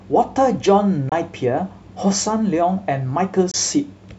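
Speech broken by two 28 ms silences, at 1.09–1.12 s and 3.51–3.54 s, likely Bluetooth dropout fitting one lost packet, visible as thin full-band blank stripes.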